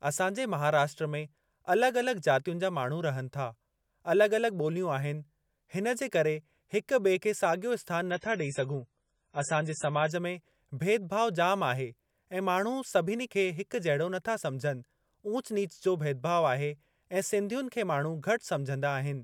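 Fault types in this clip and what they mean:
Adaptive stream at a lower bitrate: from 8.11 to 10.11 s the speech suddenly loses everything above 10.3 kHz, with no gap, unlike a dropout.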